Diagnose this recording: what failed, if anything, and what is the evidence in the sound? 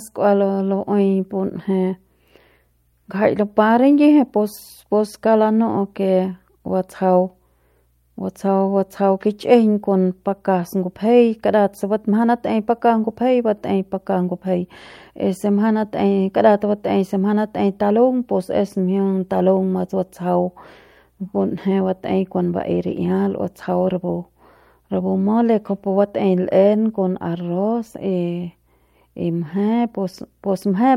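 Nothing has failed in this recording, and no stage from capture through to playback leaves an audible mark on the speech. There is no event in the sound to point to as evidence of a problem.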